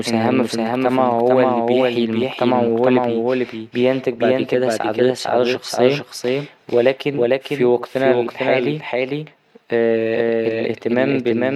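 Speech clip with a doubled audio track throughout: a second full-band copy trails about half a second behind at roughly equal level, likely from a slower capture path.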